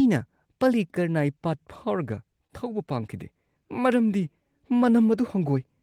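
At 2.47 to 2.51 s there is a short stall from a late packet. A packet arrived late, the jitter buffer ran dry, and the receiver held the last sound for about 25 ms before resuming, so nothing is lost but playback slips 25 ms behind, heard as a brief held moment with a slight buzz or dip.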